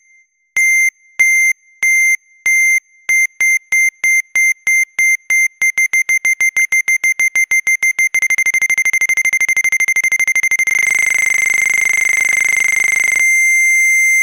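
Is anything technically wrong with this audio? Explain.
Yes, two problems. At 6.59–6.69 s and again at 12.21–12.65 s there's DAB burbling, short blips of noise where single sub-bands jump in level. Weak reception let bit errors slip past error correction into the MP2 data. The duration points to roughly five frames, then about nineteen.

From 10.86 s to the end there's a switching supply whistle, a thin tone drifting between 7.83 and 8.0 kHz, around 20 dB under the sound. A power supply is whining audibly or beating against another.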